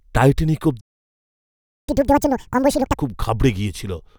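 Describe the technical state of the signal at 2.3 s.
Catch-up at higher speed from 1.88 to 2.96 s: after a stall, the player resamples its backlog at 2x, raising the speech's pitch by roughly ten semitones.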